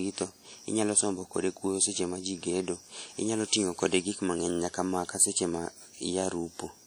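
WMA compression damage runs through the whole speech recording, from start to end, and is plainly audible. The cause is likely a transform codec such as Windows Media Audio working at a bitrate that fits roughly 48 kbps. The encoder quantises the spectrum in long blocks, so its rounding noise smears across tens of milliseconds around each sound, and weaker spectral lines get dropped. The result is a ringing, washy texture with hiss that swells and fades with the speech, while content still reaches up to about 20.1 kHz.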